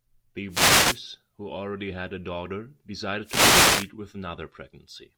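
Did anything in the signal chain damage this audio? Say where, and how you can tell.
Yes, at the analogue radio link. Wireless microphone noise hits swish in at 0.49–1.01 s and 3.22–3.91 s. The FM signal fades, so receiver static rises.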